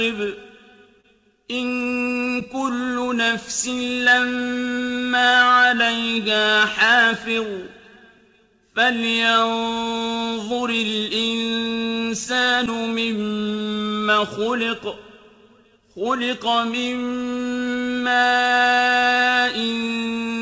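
Clock drift between sender and receiver runs through the whole recording. The sending clock appears to run about 3 percent slow, so the receiver's jitter buffer keeps draining and must be topped up to stay in step. The result is an uneven, slightly dragging sense of timing throughout.

From 0.20 s to 20.38 s the receiver makes repeated timing corrections, all in the same direction: it repeats short fragments to compensate. The playback runs at about 98 percent speed, and the repeats add roughly half a second in total. They are audible only as faint, irregularly spaced hiccups.

At 1.01 s to 1.06 s there is a short stall from a late packet. A packet missed its playout time, the buffer ran dry, and the receiver stretched the preceding sound by 29 ms until data arrived. No audio is lost, but that moment is held too long, with a slight buzz or dip. The call path's band limit is also audible, with nothing above 8 kHz, which fits G.722 at 64 kbps.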